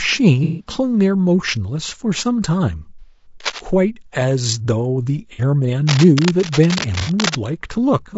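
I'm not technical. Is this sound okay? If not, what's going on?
No. Three problems stand out in this speech recording.

The audio was likely squeezed by low-delay AAC compression, the kind used for video calls, which works in very short slices and keeps too little detail. As a result the whole clip sounds rough and grainy, with a thin, artificial-sounding top end.

There is also AAC frame loss with concealment. Small pieces of the data never arrived, so the playback side guessed at them from what came just before. Each gap comes out as a brief smeared, noisy patch: about 150 ms long at 0.44 to 0.71 s and at 2.99 to 3.26 s, and about 60 ms long at 5.33 s and 7.01 s.

Finally, there is cable scratch noise, likely from a worn cable or plug being moved so that the electrical contact kept flickering. That sounds like scratchy rustling laid over the speech, briefly from 3.4 to 3.6 s and then for longer from 5.87 to 7.35 s.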